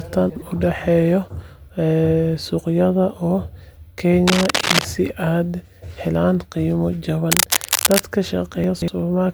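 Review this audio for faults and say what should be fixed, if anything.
Chunks out of order at 0.30–0.42 s, 7.56–7.68 s and 8.64–8.88 s. A 60 ms chunk plays one slot late, or three slots late at 8.64 s, so the speech jumbles, with hard joins that show as vertical edges on the waveform.

Cable scratch noise from 4.27 to 4.86 s and 7.31 to 8.00 s sounds like dense, uneven rustling about as loud as the speech, likely from a worn cable or connector. On a spectrogram it shows as broadband speckled bursts.

To prevent these, sequence the buffered chunks by their timestamps before writing them, and replace or reseat the faulty cable and connector.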